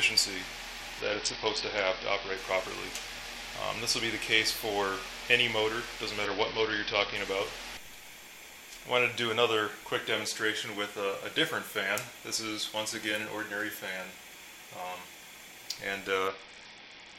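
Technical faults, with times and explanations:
1.01–2.37 s, 6.25–7.16 s and 16.28 s to the end, Bluetooth SBC bit pool drop: a congested link forced a lower encoding rate, which fits a fall from bit pool 31 to 7, around 61 kbps. The starved upper sub-bands dull the treble and coarse quantisation adds a gritty noise.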